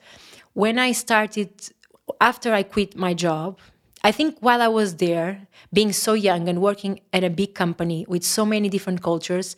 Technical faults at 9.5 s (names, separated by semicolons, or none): none